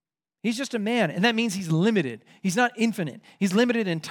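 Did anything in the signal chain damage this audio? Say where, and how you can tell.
No, nothing along the chain from capture to playback leaves an audible mark on this speech.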